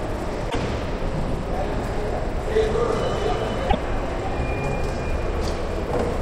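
At 0.47 to 0.56 s and again at 3.66 to 3.75 s, the audio shows damaged data in a compressed stream. Corrupted bytes make the decoder misread or reject frames and resync at the next header, leaving an 88 ms chirp, click or short hole each time.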